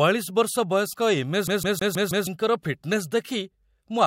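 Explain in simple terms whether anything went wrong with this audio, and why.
From 1.47 to 2.27 s the speech stutters: the same sixth of a second (about 0.16 s) plays five times in a fast, even stammer with tiny gaps. That's a CD stuck on one turn: a scratch keeps bouncing the laser back to replay that spot.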